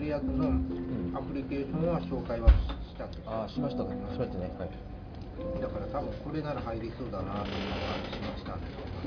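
No technical faults can be heard anywhere in this recording of sounds. Nothing in the audio points to a problem in how it was captured, processed or delivered.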